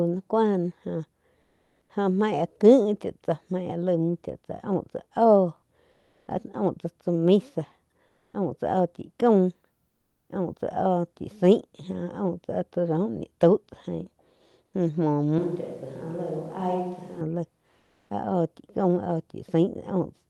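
Comfort noise in place of the background appears at 1.45–1.81 s, 5.95–6.25 s, 8.11–8.29 s and 9.91–10.27 s. The quiet background, already about 50 dB down, becomes steady, featureless hiss, likely from Opus discontinuous transmission. From 15.39 to 17.21 s a switch to a distant microphone, likely, makes the speech suddenly hollow, roomy and thinner, a few decibels quieter, with more room noise. Comfort noise returns at 17.83–18.07 s.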